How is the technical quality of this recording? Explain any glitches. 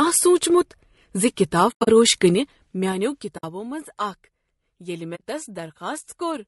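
The recording is compromised by plainly audible codec damage and three brief dropouts.

Low-delay AAC compression runs throughout the speech. The sound is rough and grainy, with noise filling the gaps between pitch harmonics and a lowered or synthetic-sounding top band. This is likely AAC-ELD, whose short frames resolve harmonics poorly, at a bitrate around 32 kbps.

AAC frame loss with muting occurs at 1.71–1.88 s, 3.37–3.44 s and 5.15–5.21 s. Missing frames were decoded as silence, and overlapping windows fade the sound out and back in, leaving soft-edged holes. The first loses about 140 ms scattered over 160 ms, its longest gap roughly a tenth of a second. The others last 60 ms and 40 ms.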